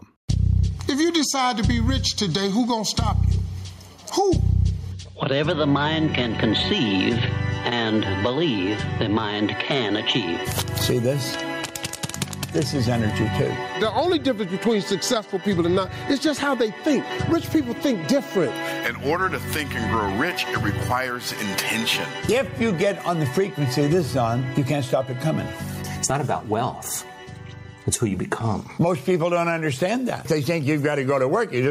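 Gain pumping runs throughout: background noise swells between loud sounds and ducks by around 15 dB under each, likely from excessive input gain hitting a fast limiter, leaving a flattened waveform envelope.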